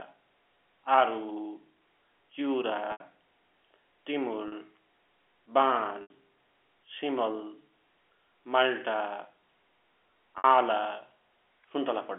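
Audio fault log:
2.92–3.00 s, 4.48–4.52 s, 6.02–6.10 s, 10.38–10.44 s: packet loss with pitch repetition. Gaps of 80, 40, 80 and 60 ms were filled by looping the last pitch period, so the 40 ms gap sounds like a brief, held, buzzy tone in the telephone-band audio, while the longer ones fade into silence before the speech returns with a short cross-fade.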